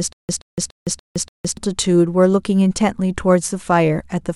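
A stall in playback, likely with the player retrying on its last buffered fragment, causes a stutter with silent gaps from the very start to 1.57 s. A 126 ms burst of speech repeats five times, each followed by 163 ms of dead silence, recurring every 289 ms.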